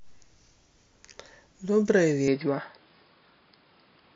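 At 2.28 s the speech turns duller and boxier, and it stays that way to the end. Nothing reaches above 5.1 kHz after this point. The level shifts by roughly 5 dB. A new background noise appears, well below the speech. There is no gap at the change. This is most likely an input switched to a poorer device, such as another microphone or a headset's call profile. That device passes a narrower band and brings its own tone and noise.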